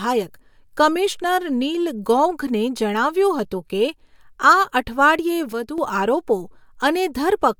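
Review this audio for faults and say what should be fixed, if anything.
There's a sudden gain jump at 5.53 s: the level drops by about 8 dB in a single step and stays down until 5.78 s, when it snaps back up. The background noise falls and rises right along with the speech, which tells you the whole signal got scaled at once, not that the talker got quieter. The likely cause is a digital gain setting or bit shift applied from one sample to the next with no ramp. To prevent it, smooth any gain change over a few milliseconds instead of applying it instantly.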